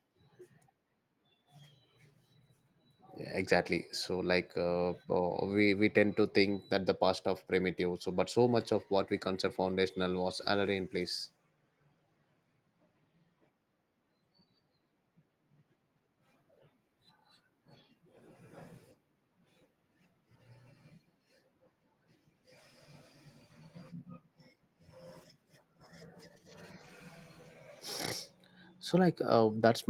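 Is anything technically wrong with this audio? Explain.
No, nothing is technically wrong with this speech recording, which carries the light, expected traces of Opus voice compression running in hybrid mode at full bandwidth at around 24 kbps.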